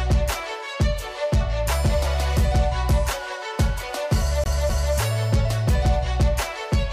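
CD stuck on one turn, from 4.44 to 4.95 s: a scratch kicks the laser back a single track at the same point on each rotation, so the player keeps returning to the same patch of audio instead of moving forward. Here a 257 ms segment plays twice in a row, with a short mute at each jump back. The result is the quick, evenly spaced stutter of a skipping disc before playback resumes.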